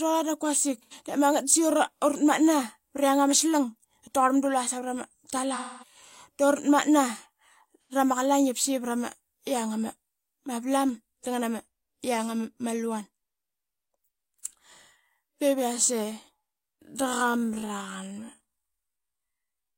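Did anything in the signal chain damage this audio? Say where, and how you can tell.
Yes. At the codec and network stage, AAC frame loss with concealment shows up three times. From 0.79 to 0.93 s, between "dap quasik" and "de mangat da", a smeared, noisy patch replaces the speech. A second one runs from 5.53 to 5.96 s. A third sits at 7.83 to 7.92 s, just before "rama qalaing". The short gaps are about 85 ms, which fits two lost AAC frames. The middle one is 256 ms, which fits six. The decoder patched each hole from the last good spectrum.

The final stretch, from 16.78 s to the end, is a time-stretched section. Speech there runs at half pace, yet the pitch stays put. The change in pace is abrupt. Short pieces are repeated to fill the added time. The likely cause is stretching software at the processing stage, fitting the audio to a longer duration while holding pitch.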